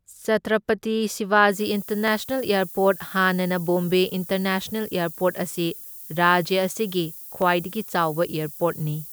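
From 1.52 s to the end, the signal is requantised to only 7 bits, with the rounding error fed back through a noise-shaping filter that pushes it toward high frequencies. At that bit depth the error floor sits only about 15 dB below the speech, so a constant thin hiss sits over everything from that point on. It grows sharply brighter toward the top of the band rather than staying evenly spread.

At 2.08 s and again at 7.42 s, the waveform jumps abruptly from one value to a later one. This is likely a case of dropped samples, with a fraction of a millisecond missing from the stream each time. That gap is far too brief to remove any audible sound. Each jump is heard as a single sharp click, which shows in the spectrum as a thin vertical line spanning all frequencies.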